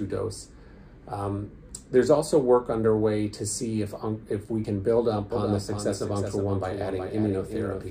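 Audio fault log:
1.69 s and 4.65 s, audio missing between chunks. The sound jumps forward with no silence at the join, dropping roughly 50 ms each time. The skips fall 3 s apart, which points to chunked recording or processing that likely loses a piece at each chunk boundary.
5.32 s to end, doubled audio track. A second full-band copy enters abruptly and runs to the end, trailing about 0.4 s behind and about 5 dB quieter. It has no decay or room colour, so it is likely the same audio mixed in twice, out of step.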